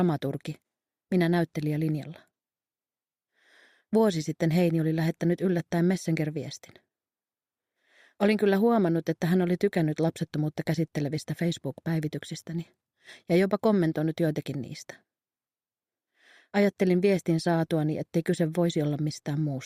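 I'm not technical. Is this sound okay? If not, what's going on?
Yes, nothing wrong here.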